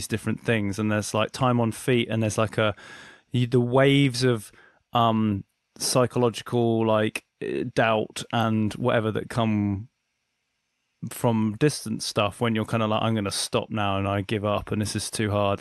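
Speech clip: no technical faults.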